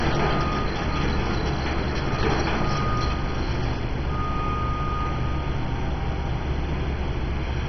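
From start to finish, the audio is dull and muffled. Nothing is heard above about 6.1 kHz. The upper range seems to drop in and out in blocks, and what remains has a gurgling, granular roughness. The likely cause is heavy MP2 compression. MPEG Layer II divides the spectrum into 32 equal bands and shares out bits among them. Short of bits, it shuts off the top bands and quantises the rest coarsely. The damage fits a rate of about 32 kbps.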